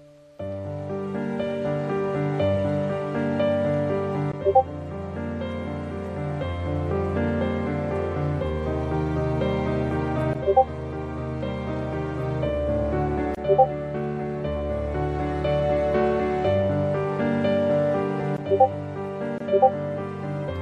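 Throughout, the sound is watery and swirling, with smeared attacks and dulled treble. The likely cause is MP3 compression at a rate consistent with 64 kbps, which starves weak frequency lines of bits. A spectrogram shows a flat high-frequency ceiling and patchy, flickering gaps.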